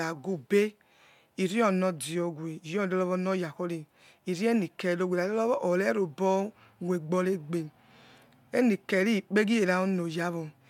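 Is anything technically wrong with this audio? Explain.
No, nothing in this speech recording stood out as a technical problem on listening.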